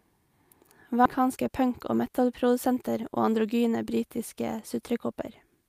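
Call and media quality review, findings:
Abrupt jump forward at 1.05 s, about 0.7 s of speech absent, sides spliced with no audible gap. Skip ahead: jitter buffer discarded a stretch of queued audio, likely on overflow, with later packets already waiting, so playout latency dropped sharply.

Speech slightly hurried, pitch unchanged, 1.19 s to 2.68 s, running about 105% speed. Jitter buffer speed-up: buffer above target depth after the backlog, so the receiver trimmed short pitch-period segments repeatedly, removing roughly a tenth of a second overall.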